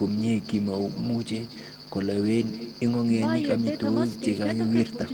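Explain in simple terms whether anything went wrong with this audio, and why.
Echo with no canceller runs through the whole clip. The far end played this speech through a loudspeaker, its microphone caught it, and nothing removed it, so every phrase returns about a fifth of a second later as a quieter, thinner copy.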